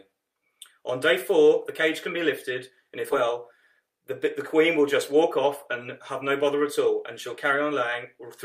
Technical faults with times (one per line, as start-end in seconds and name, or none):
3.11-3.13 skip ahead
3.79-5.67 jitter buffer speed-up
6.11-6.79 jitter buffer speed-up